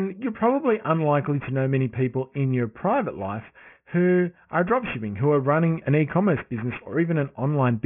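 Speech runs through the whole clip with aliasing throughout. Energy stops hard at 3 kHz, which fits a drop to a 6 kHz sample rate made without an anti-alias filter. Everything that lay above 3 kHz has folded back below it, about 20 dB under the speech, so sibilants come out gritty and metallic at the wrong pitches. A plain low-pass filter would only sound dull, with no misplaced, inharmonic hash piled against the band edge.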